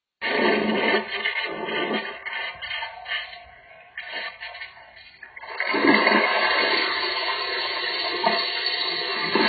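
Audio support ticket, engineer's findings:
AAC compression, throughout. Nothing above 4.6 kHz; dull, smeared sound with heavy warbling, fizzy texture on sustained parts. Likely AAC-LC encoding at a very low bitrate, around 12 kbps; the encoder drops the top band and coarsely quantises the rest, leaving spectral holes or bands filled with substitute noise.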